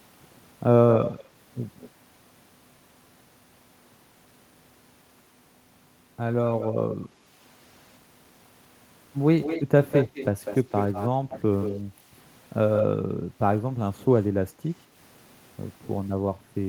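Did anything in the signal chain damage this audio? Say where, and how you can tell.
Yes. A delayed copy of the speech trails it at 0.92–1.24 s, 6.46–6.95 s, 9.41–11.8 s and 12.76–12.85 s. It lags by 171 to 231 ms and ranges from faint to as loud as the original. This echo leak likely arises in call processing, where a far-end echo canceller passed on its loudspeaker pickup.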